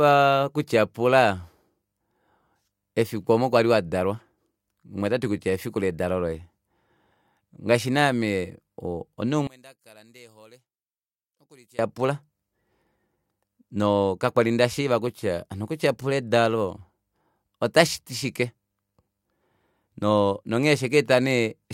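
From about 9.47 to 11.79 s the speech suddenly drops by about 29 dB and turns faint, as if most of it cancelled out. That's likely one channel inverted, with the shared centre content wiping itself out when the channels are summed to mono.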